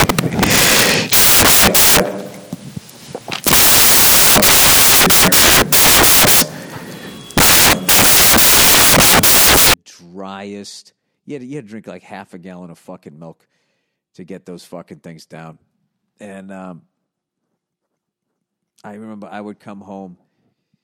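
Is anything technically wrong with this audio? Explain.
Yes. Samples built from the wrong bytes, from 0.0 to 9.74 s: each sample's bytes are combined misaligned or in swapped order, so the rapidly changing low bits land in the most significant position. The speech comes with loud, harsh broadband noise, close to white on the louder passages.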